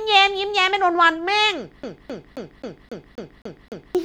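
The speech clip has a CD stuck on one turn: from 1.83 s to 3.95 s the laser keeps jumping back, replaying a 265 ms slice eight times with brief mutes.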